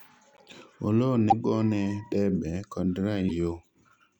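At 0.35–0.40 s, 1.29–1.33 s and 3.28–3.31 s the speech skips forward with a brief chirp, burst of noise or short hole, likely a broken MP3 bit reservoir after dropped frames.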